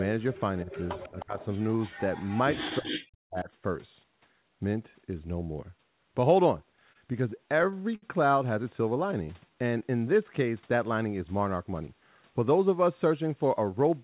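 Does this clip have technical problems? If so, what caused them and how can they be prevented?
Yes. An echo leak is heard at 0.00–0.04, 0.34–0.41, 0.71–1.24, 1.40–1.46 and 1.82–2.42 s. A delayed copy of the speech arrives 311 ms after the original, in scraps and short stretches, at about 15 to 35 dB below the main talker. The likely cause is a far end playing the call on a loudspeaker whose echo canceller did not fully remove what its microphone picked up, so the residue was sent back. Use a headset or tune the echo canceller properly.

Speech is suppressed in double talk at 0.64–0.70, 1.10–1.39 and 2.79–3.49 s. The talker dips by about 10 dB at first, then about 25 dB, and by roughly 40 dB in the last stretch. This is likely the echo canceller failing to separate the near talker from loudspeaker echo, so it attenuated both. Better acoustic isolation or a headset reduces double-talk suppression.

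Repeated stalls (stutter) run from 6.80 to 8.04 s. The audio halts and resumes about nine times, the longest gap near 67 ms and roughly 150 ms filled in total, with nothing actually lost. Packets arrived late or slower than playout, so the jitter buffer kept running empty and the receiver stretched the last sound each time. A more stable network path or a larger jitter buffer target prevents this.

A jitter buffer slow-down occurs from 9.17 to 9.80 s. Playback runs at about 90% speed with unchanged pitch, adding 70 ms, so sounds are drawn out. The buffer was low or had just raised its target delay, and the receiver repeated pitch periods to rebuild its reserve. Reducing network jitter keeps the buffer from draining.

A jitter buffer speed-up follows from 11.75 to 12.59 s. The audio runs at about 110% with unchanged pitch and sounds hurried, with around 100 ms trimmed out. The buffer held more audio than its target, and the receiver dropped pitch periods to cut the delay. 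Smoother packet delivery avoids these bursts.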